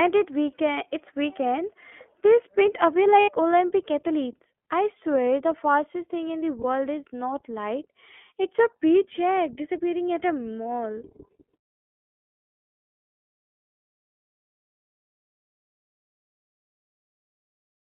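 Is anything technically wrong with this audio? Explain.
Yes. The speech sounds narrow, thin and slightly rough and synthetic throughout. Nothing is heard below about 250 Hz or above 3.4 kHz. This is the iLBC codec, a narrowband VoIP coder that codes the excitation of each 20 ms frame on its own rather than building on the previous frame. The damage is plainly audible, and the quality fits its 15.2 kbps mode.

There are two brief dropouts from lost iLBC frames. From 3.20 to 3.31 s, right after "weekend they sprint away", the sound turns into a held, buzzy, breathy vowel for about 80 ms, which fits four missing 20 ms frames. From 6.62 to 6.64 s, between "fastest thing in the" and "is not light it's", there is a shorter smear of about 20 ms. In both gaps the decoder filled the lost audio by repeating the last pitch cycle mixed with noise. Because each frame decodes independently, the speech recovers cleanly as soon as the next frame arrives.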